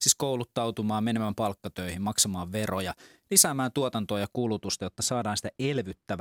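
From 0.0 to 4.35 s the speech has pre-emphasis left on: an FM 50 µs treble boost with no matching de-emphasis, leaving 10 kHz about 11 dB hot, so it sounds thin, bright and sibilant.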